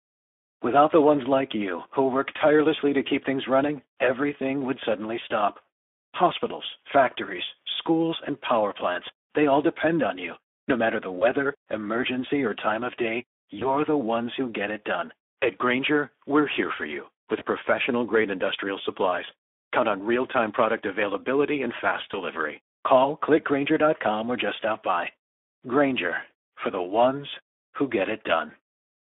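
Speex codec damage runs through the whole of this speech clip, plainly audible from start to finish. The voice has a noisy, hoarse edge because the CELP coder has too few bits to model the excitation faithfully, a roughness that fits a rate near 11 kbps. The line band is also limited to roughly 250 Hz to 3.5 kHz, so the low body and upper brightness are absent.

VoIP packet loss concealed by the speech codec occurs at 11.19–11.26 s (between "matter the" and "emergency or time of"), 13.59–13.76 s (after "or time of day", before "the ones who get"), 17.39–17.48 s (after "here for you", before "professional grade industrial supplies") and 22.11–22.16 s. Each gap is about 20 ms of lost audio, consistent with a single dropped frame. The decoder fills it by extending its last pitch and filter state at falling gain, which gives a short buzzy or smeared patch. Because each frame builds on the one before, the voice stays weak or distorted until the decoder recovers, which is why the 13.59 s disturbance lasts well beyond the 20 ms gap.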